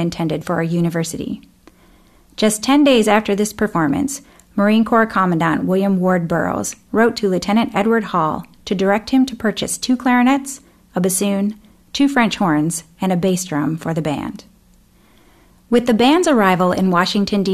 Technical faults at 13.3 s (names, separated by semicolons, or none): none